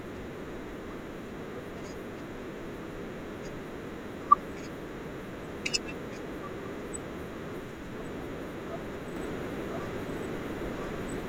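A second, delayed path has likely fed the same speech into the mix a second time, producing a doubled audio track from 9.17 s to the end of the clip. A full-band copy runs about a second behind the original at roughly the same level, with no decay or room colour of its own. It cuts in abruptly, so the final stretch sounds like two identical overlapping streams talking over each other.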